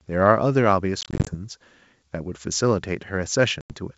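Speech over a G.722 wideband line with packet loss on an ADPCM call: from 1.01 to 1.35 s about 150 ms drops out in short gaps of up to 20 ms, and at 3.61 to 3.73 s roughly ten packets go. Each hole is silent and hard-edged, and the ADPCM decoder comes back out of step with the sender, so the speech resumes slightly distorted before settling.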